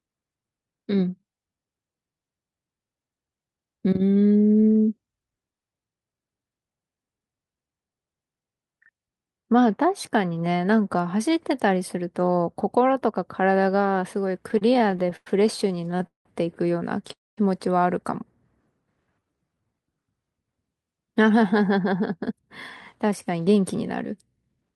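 From 14.48 to 15.27 s the speech drags and stutters through twelve brief holds, the longest 100 ms, filling about 226 ms in all. Then from 15.68 to 16.26 s there are eight more, totalling 260 ms with the longest at 186 ms. These are repeated stalls (stutter). Packets kept arriving late, so the jitter buffer emptied over and over, and the receiver stretched the last sound each time before carrying on with nothing lost.

At 17.12 to 17.38 s the sound stops dead for about a quarter of a second, mostly silence (around 210 ms). This is a call audio freeze, likely from packets held up in transit. The receiver briefly continued the last sound, let it fade out, and then resumed where it left off. That inserted a 248 ms gap and added that much delay.

From 19.20 to 19.74 s the speech slows to about 83% speed at unchanged pitch, sounding drawn out. This is a jitter buffer slow-down. With the buffer running low, the receiver repeated single pitch periods to add roughly 102 ms and rebuild its reserve.

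From 21.40 to 22.43 s, and again from 23.04 to 24.74 s, the speech sounds hurried at the same pitch, running at 107% and then 108% speed. This is a jitter buffer speed-up. The buffer held excess audio, so the receiver cut short pitch-period pieces, removing roughly 70 ms and then about 150 ms.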